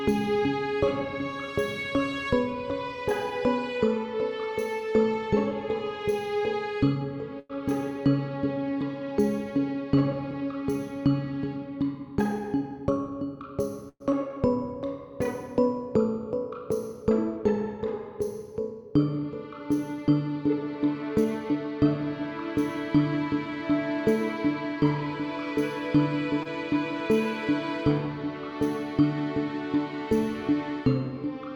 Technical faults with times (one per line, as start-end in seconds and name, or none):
7.39-7.51 call audio freeze
12.19-13.18 jitter buffer speed-up
13.89-14.02 call audio freeze
14.12-14.14 short concealed packet loss
14.29-14.75 jitter buffer slow-down
21.02-21.79 jitter buffer speed-up
26.43-26.47 short stall from a late packet